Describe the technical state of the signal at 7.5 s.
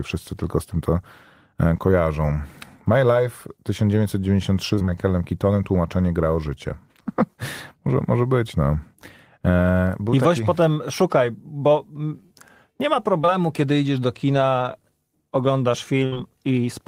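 Around 7.5 s the speech signal is intact, with no audible fault at that moment.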